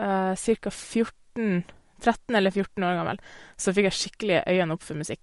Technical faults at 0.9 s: MP3 compression

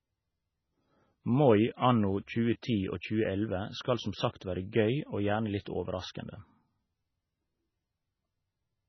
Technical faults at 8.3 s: MP3 compression

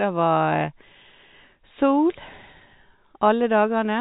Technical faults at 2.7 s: none

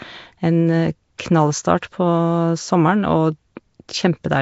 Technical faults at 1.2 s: Nellymoser compression; pre-echo

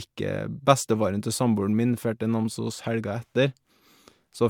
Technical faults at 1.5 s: generation loss

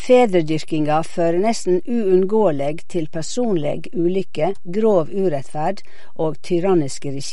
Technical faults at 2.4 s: DC offset; MP3 compression

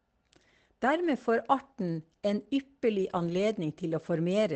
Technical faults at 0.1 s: none

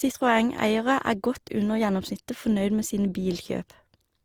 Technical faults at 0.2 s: generation loss

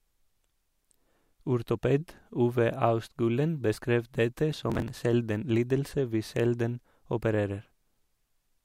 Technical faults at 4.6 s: processor overload crackle

